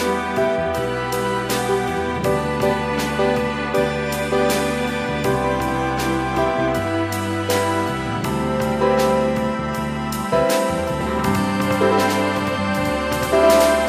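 From 11.01 s to the end, every sound is followed by an identical second copy at about the same level, trailing by roughly a tenth of a second. It arrives with no decay or room colour and cuts in abruptly, so it sounds like a crisp, stuttering slapback rather than reverb. This is a doubled audio track, likely from the same signal being captured a second time through a slower path, or two out-of-step copies left in the mix.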